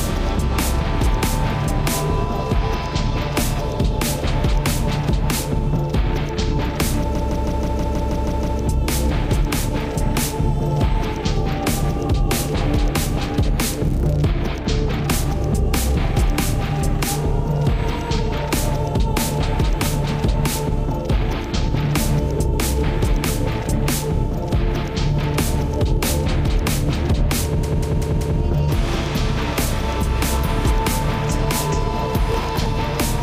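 A recording of general sound with two kinds of fault. Repeated frames cause stutters at 7.15 to 8.59 s and 27.63 to 28.40 s. The first loops a 160 ms block nine extra times, adding 1.44 s. The second loops a 192 ms block four extra times, adding 0.77 s. Each block fits a short run of compressed frames sent or stored more than once, and the decoder plays it again. Processor overload crackle appears from 32.26 to 32.66 s. It is a brief gritty tearing. The processor missed about twenty deadlines for very small buffers, each under a millisecond. Each missed buffer was skipped, leaving a tiny hard-edged gap. The gaps bunch into crackle that ends when the load eases.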